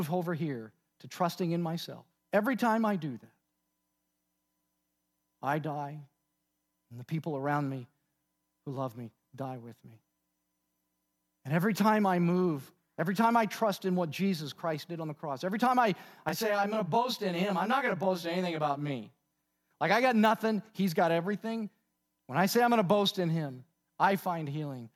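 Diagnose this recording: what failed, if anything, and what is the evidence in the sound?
From 16.29 to 18.92 s the speech turns rough and slightly doubled, with a fixed comb of notches starting near 20 Hz. This is channel delay (comb filtering) at the driver or buffer stage: one channel runs roughly 20 ms late, and summing to mono cancels evenly spaced frequencies.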